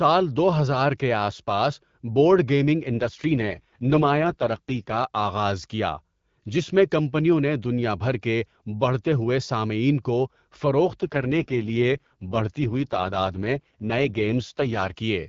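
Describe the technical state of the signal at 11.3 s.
An AMR rate drop is under way at 11.3 s. It began at 11.02 s and lasts until 14.95 s. Over a weak radio link, the network has pushed the wideband speech coder to a lower mode, spending bits on error protection instead of on the speech itself. The bandwidth holds and nothing drops out, but the speech turns rough, raspy and synthetic, which fits a step down from 12.65 to 6.6 kbit/s.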